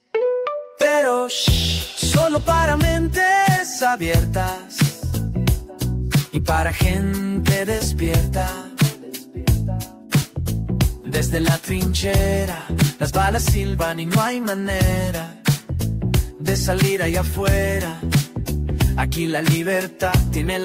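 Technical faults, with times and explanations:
10.21–10.25 s, 14.00 s and 16.59–16.62 s, corrupt frame decoded: brief chirps or bursts of misplaced energy, peaking around -15 dBFS at the first and last and fainter, around -25 dBFS, at 14.00 s. Damaged compressed frames were decoded anyway, so wrong gains or codes landed at the wrong frequencies. Unlike a dropout or concealed loss, which goes quiet or smears, these add new, foreign-sounding content.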